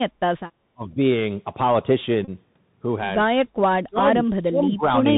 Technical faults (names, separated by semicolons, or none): Bluetooth CVSD headset codec; speech suppressed in double talk; Bluetooth headset packet repeated